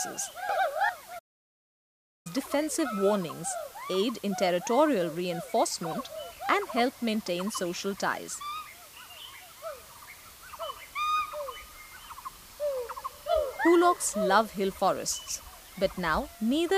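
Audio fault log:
Throughout: low bit depth with dither. There's a steady, even hiss under everything, sitting only around 20 dB below the signal, so it's hard to miss. The audio is carried on just 7 bits, and dither was added before rounding, which turns the rounding error into flat white noise instead of gritty distortion. That's why you hear a constant hiss that doesn't pump or change with the material and doesn't smear or crunch the sound itself.
1.18–2.27 s: playback stall. The sound cuts out in mid-flow and there's dead silence for about 1.06 s before it picks back up. This is likely the player running dry of data or its audio thread getting blocked, so nothing reached the output until it recovered. A gap of more than a second sounds like the stream simply freezing rather than a brief click or dropout, which makes it stand out sharply against the continuous hiss.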